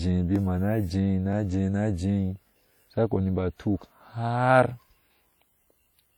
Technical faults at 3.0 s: WMA compression

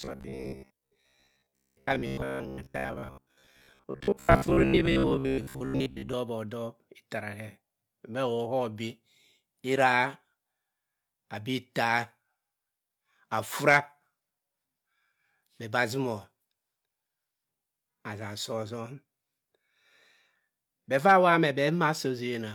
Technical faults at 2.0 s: robotic sound from repeated short buffers

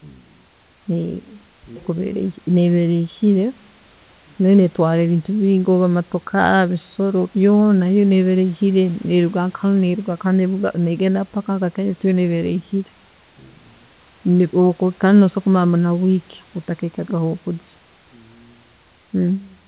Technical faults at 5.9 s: none

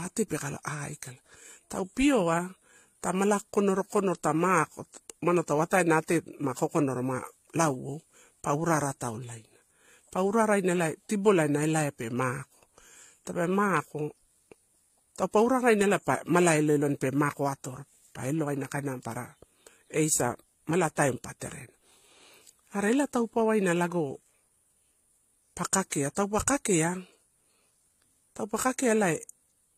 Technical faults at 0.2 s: transcoding between lossy codecs

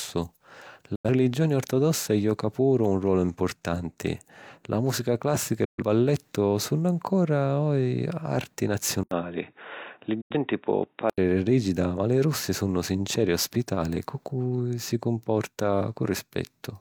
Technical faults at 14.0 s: none

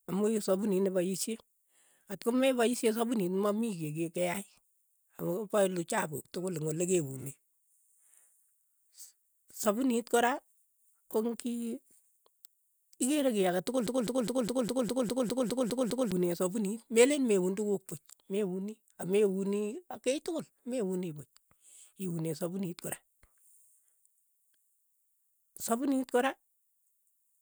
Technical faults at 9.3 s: none

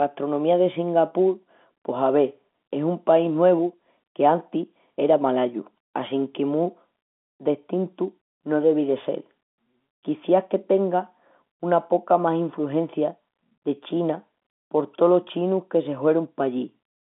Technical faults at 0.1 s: none

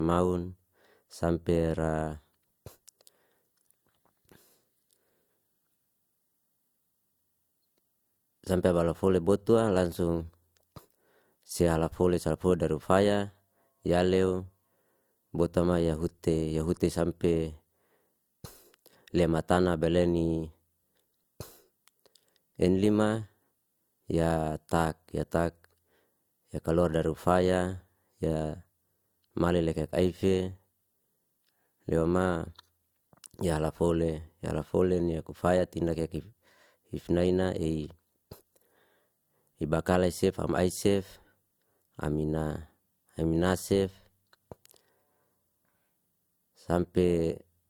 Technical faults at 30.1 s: transcoding between lossy codecs

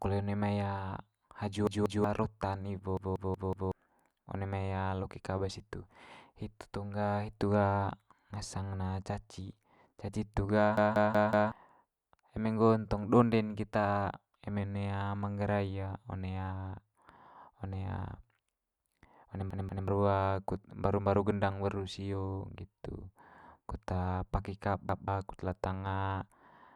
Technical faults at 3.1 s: repeated buffer

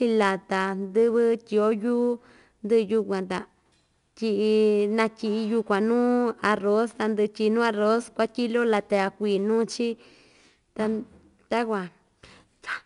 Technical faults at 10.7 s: 4-bit ADPCM compression

